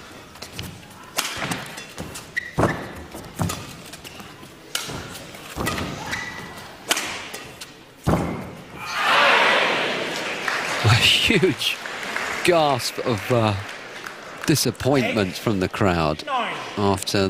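At 2.65 s the audio jumps forward by about a tenth of a second, a sign of compressed frames skipped: a handful of encoded frames were never decoded, so the decoder moved straight to a later frame. The gap matches a whole number of frames of roughly 23 ms, which fits 1024-sample frames at 44.1 kHz. On a waveform the envelope shifts abruptly with no silent gap. On a spectrogram there is a vertical smear and the patterns before and after do not line up.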